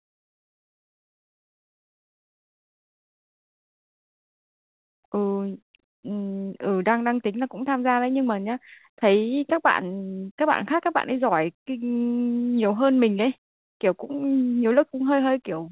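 From 4.22 to 6.25 s the speech runs about 6% fast at unchanged pitch, a jitter buffer speed-up trimming roughly 150 ms of excess queued audio.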